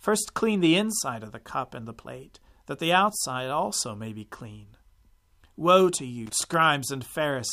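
Loose connector crackle at 6.26 to 6.54 s in this speech: a worn or dirty contact rapidly breaking and remaking chops the signal into a brief irregular scratchy burst.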